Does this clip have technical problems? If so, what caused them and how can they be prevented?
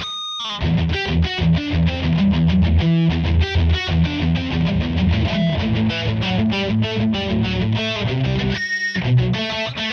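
No, nothing technical stands out here, so there's no fault to trace back or prevent.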